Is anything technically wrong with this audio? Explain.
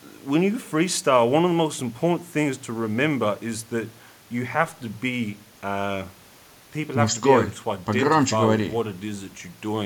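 No, nothing is technically wrong with this speech recording. No fault can be heard at any point in it.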